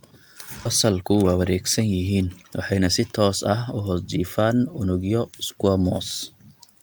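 Jitter buffer speed-up runs from 0.85 to 2.88 s in this speech clip: the talking plays at about 111% of its normal rate while the pitch stays unchanged, so that stretch sounds hurried. The receiver's buffer had built up more audio than its target, and to shed the excess it cut out short slices of one or a few pitch periods repeatedly, trimming roughly a fifth of a second in total.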